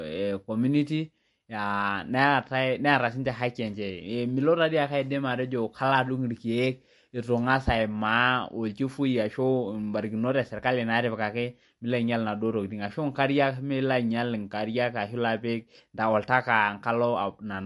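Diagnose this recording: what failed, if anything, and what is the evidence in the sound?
The fault sits at the codec stage. Throughout the speech, nothing is present above 11.3 kHz, and the coding damage is plainly audible. The likely cause is MP3 compression at a low bitrate, near 49 kbps. Short of bits, the encoder cut the treble and discarded weak detail.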